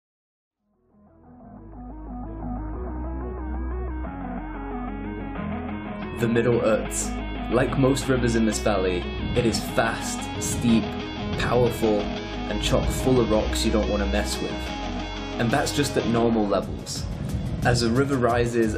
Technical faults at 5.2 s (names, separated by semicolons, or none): damaged data in a compressed stream